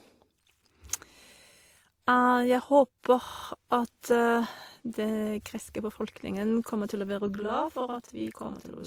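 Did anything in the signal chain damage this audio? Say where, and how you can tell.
Yes. Throughout the clip the speech carries two layers of codec smearing at once: the different artefacts of each codec heard together, with nothing above 20.4 kHz. That is likely transcoding between lossy codecs, consistent with a WMA 96 kbit/s encode later re-encoded as Opus 32 kbit/s, each pass adding artefacts.

At the driver or buffer stage, a system hang loop appears from 3.24 s to 3.44 s. A single 40 ms slice repeats five times, producing a rough 25 Hz buzz-stutter. The sound card kept replaying its ring buffer while the host stalled.

From 7.35 s, just after "kommer til å være", until the end, a channel delay (doubling) appears. One channel runs 40 ms behind the other, and the mono sum yields an equal-level slap doubling. This points to a mismatched buffer on one channel at playback or capture.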